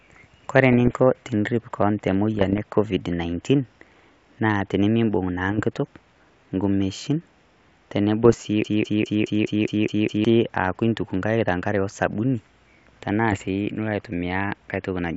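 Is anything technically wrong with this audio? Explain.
Yes. The speech carries two kinds of fault over its wideband telephone sound.

Bit errors on an ADPCM link occur at 0.73–0.96 s, 2.35–2.58 s, 5.49–5.64 s, 8.24–8.42 s and 13.32–13.45 s. Flipped bits, at a rate of well under one percent, throw off the decoder's step size and prediction, so each hit smears into pops, rough bursts and brief jumps in level.

A broken-record loop runs from 8.65 to 10.25 s. A fragment of about 0.21 s repeats back to back eight times, most likely because the stream stalled and kept resending its last buffered piece, and the speech that should have played there is lost.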